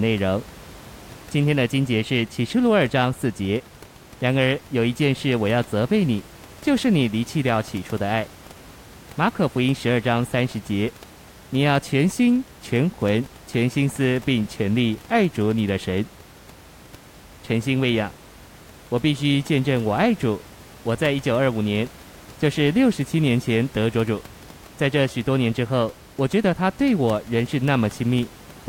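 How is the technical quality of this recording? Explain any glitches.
No glitches turn up anywhere in this speech recording, and the only thing underneath it is a bit of ordinary room noise sitting about 23 dB below the speech, which is just part of the space the microphone was in.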